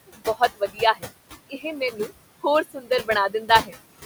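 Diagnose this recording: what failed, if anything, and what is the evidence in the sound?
Call processing: noise suppressor artifacts throughout. The room noise, about 13 dB under the speech, is pushed down by about 19 dB in gaps and rises under the words.

Call processing: speech cut by the noise suppressor at 0.07–1.06 s, 1.49–2.11 s, 2.64–3.09 s and 3.29–3.73 s. Quiet speech mistaken for noise drops up to about 19 dB and sounds swallowed.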